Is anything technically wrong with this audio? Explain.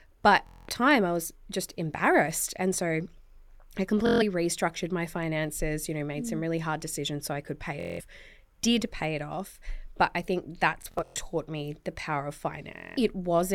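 Yes. The speech has Bluetooth stutter at 0.47–0.69 s, at 4.07–4.22 s just before "restructured my finances you", at 7.80–8.01 s after "so I could pay", at 10.82–11.21 s between "off but I think" and "me the power of", and at 12.77–12.97 s. Packets arrived late or not at all. The receiver replayed its last short slice, which fits frames of about 23 ms. Each gap gives a rapid machine-gun buzz of 140 to 210 ms. At 10.82 s the repeats are scattered, with the longest run about 93 ms. Speech then resumes further on, as if it had kept playing.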